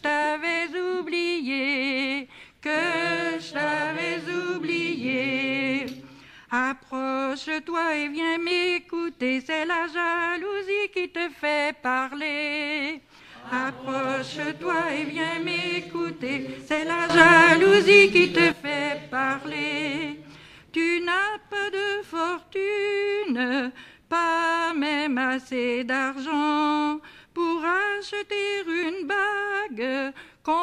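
A sudden gain jump runs from 17.10 to 18.52 s, likely from a digital gain setting being applied instantly with no ramp. The audio and its background noise leap together by about 12 dB, then drop back just as abruptly.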